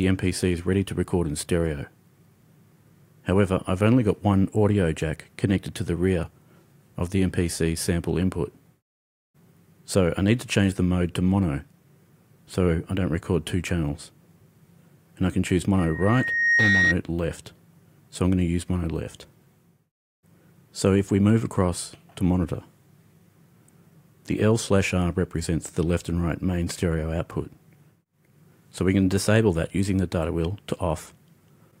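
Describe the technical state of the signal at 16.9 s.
Loudspeaker feedback squeal runs from 15.78 to 16.96 s, so 16.9 s falls in its final moments. The microphone is picking up its own loudspeaker, and at 1.9 kHz the loop gain exceeds one. That tone swells over roughly 0.7 s into a squeal standing around 5 dB above the sound.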